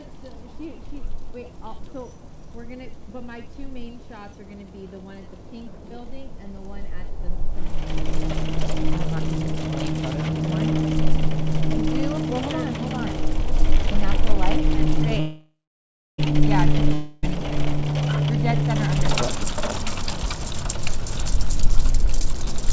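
At 15.20 s the audio stops and the last sound is drawn out as a fading buzz that decays into silence for roughly two thirds of a second, resuming at 16.20 s. This call audio freeze was likely caused by delayed packets draining the jitter buffer. Nothing is lost; a gap of about one second is inserted.

From 16.94 to 17.25 s a second break appears, a long network dropout: the receiver fills about 0.29 s with a decaying continuation of the last sound, then the audio returns with roughly 0.3 s missing.

From 17.29 s to 22.67 s a jitter buffer speed-up follows, as the receiver trims short pitch-period pieces to drain the backlog that built up. Playback runs at about 117% speed with unchanged pitch, sounding hurried while roughly a second of delay is shed, all within a band that stops at 8 kHz.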